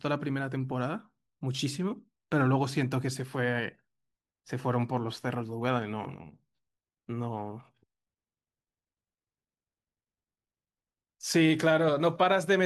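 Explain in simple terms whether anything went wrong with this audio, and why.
Nothing went wrong with this speech recording: no dropouts, glitches or distortion anywhere.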